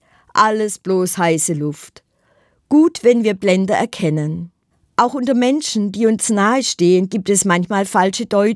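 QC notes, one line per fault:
No faults found.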